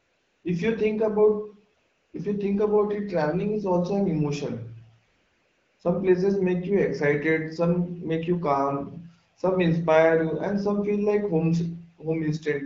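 From 0.00 to 0.43 s, again at 1.79 to 2.13 s, and at 5.07 to 5.79 s, you get AMR comfort noise. The phone decided nobody was talking, stopped sending speech frames, and the far end painted in a smooth, steady synthetic hiss that snaps in and out against the clean wideband audio.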